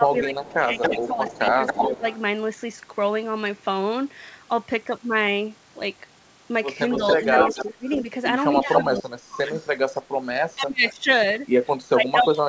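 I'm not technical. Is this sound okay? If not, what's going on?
No. There are two problems, and they show up in overlapping stretches.

The first is speech suppressed in double talk, at 0.0 to 2.04 s, 7.18 to 9.52 s and 10.55 s to the end. While the other side of the call was playing through a loudspeaker, this voice gets pushed down. The echo canceller likely couldn't tell this talker apart from the loudspeaker sound, so it turned both down. The drop is deepest in the middle stretch.

The second is echo leak, at 0.19 to 2.19 s, 6.91 to 9.69 s and briefly at 10.88 to 10.93 s. You hear a second, delayed copy of a voice trailing 275 ms behind the original. In the first two stretches it's not much quieter than the voice itself, and in the last one it's much quieter. This is likely the loudspeaker side's echo canceller not fully removing what its microphone picked up, so some of it got sent back.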